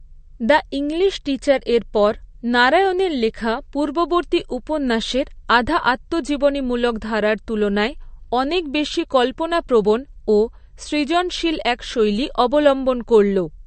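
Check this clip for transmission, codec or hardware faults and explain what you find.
One codec fault runs through the whole clip: MP3 compression, likely the cause of the damage heard. Nothing is present above 8.6 kHz, the hard treble cut an MP3 encoder applies when starved of bits, which fits a low bitrate around 40 kbps. Weak frequency lines dropping in and out between frames make the speech sound plainly watery and swirly, with metallic chirping on s sounds and smeared consonant attacks.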